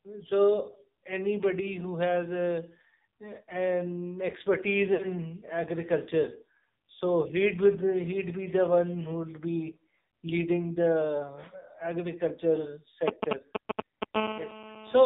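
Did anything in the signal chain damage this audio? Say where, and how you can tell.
Yes. Codec stage: AMR narrowband mobile codec. Nothing above 4 kHz survives. The buzzy, synthetic speech fits a low bitrate near 6 kbps.

Network stage: lost AMR speech frames at 4.94 to 5.06 s. The decoder stretches and fades the sound for 60 ms, which fits about three lost frames.

Analogue wiring: GSM signalling bursts from 13.08 to 14.04 s. Galloping ticks and 217 Hz buzzes sit louder than the speech. The circuit rectifies a nearby phone's radio.

Analogue wiring: GSM phone buzz from 14.14 to 15.01 s. A steady, raspy 217 Hz buzz runs about 5 dB below the speech, from rectified call bursts.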